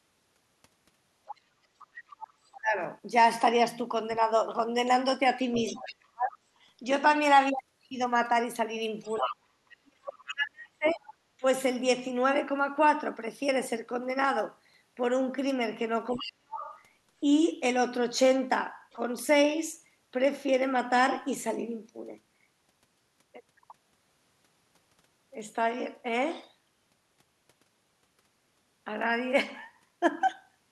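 From 1.26 to 5.95 s, a second voice sits under the talker. This is the other side's voice leaking through, about 20 dB below the speech. It is likely loudspeaker echo that the echo canceller left in the microphone signal.

From 2.61 to 11.43 s, there is speech suppressed in double talk. The talker's voice dips sharply in places, by up to roughly 40 dB. The cuts add up to around two seconds. The likely cause is the canceller failing to tell the talker from the echo and turning both down.

From 9.04 to 11.09 s, the other side's voice leaks through again, now louder, only about 10 dB under the speech. This is likely stronger residual echo from the far end.

From 16.1 to 18.94 s, the other side's voice leaks through once more, about 20 dB down. It is likely echo the canceller again missed.

Overlapping it, from 16.14 to 19.0 s, speech is suppressed in double talk. The talker drops out in short pieces, up to roughly 40 dB down, for under a second in total. 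The likely cause is the canceller clamping down while both sides talk at once.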